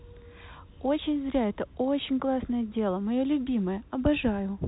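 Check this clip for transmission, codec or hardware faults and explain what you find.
No transmission, codec or hardware faults are present.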